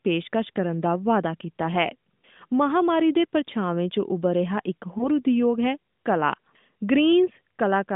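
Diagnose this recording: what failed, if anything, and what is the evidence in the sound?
The network stage failed, through lost AMR speech frames. At 4.98 s a brief dip or warble runs to about 5.09 s, which fits a single lost 20 ms frame. The AMR decoder would have failed the frame's checksum and filled the gap by reusing the last good pitch and vocal tract settings at reduced gain, so the speech sags briefly and then recovers. The speech is carried in AMR narrowband, band-limited to 150 Hz to 3.6 kHz.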